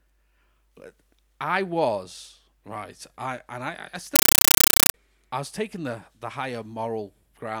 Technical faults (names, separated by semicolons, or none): compressed stream played as audio